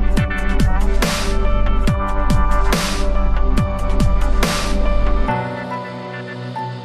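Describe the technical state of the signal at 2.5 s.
At 2.5 s the signal is intact, with no audible technical fault at that moment.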